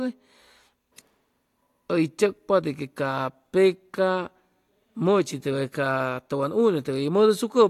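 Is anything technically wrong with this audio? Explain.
No, nothing technically wrong stood out on listening to this speech recording.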